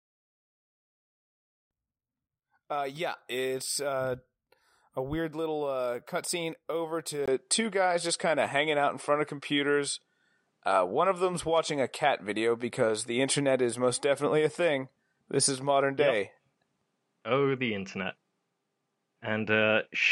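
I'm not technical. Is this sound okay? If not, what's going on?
No. At about 7.26 s, right after "little uh cutscene over", there's a tiny gap and the sound goes duller, with a faint new background hiss and a small change in volume. It's likely an input switched to a poorer device, and it stays that way to the end.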